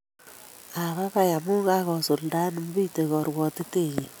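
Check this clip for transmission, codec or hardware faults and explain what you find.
No transmission, codec or hardware faults can be heard.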